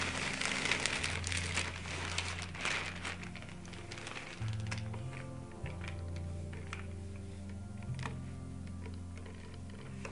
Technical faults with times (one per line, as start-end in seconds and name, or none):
0.00-10.12 wrong sample rate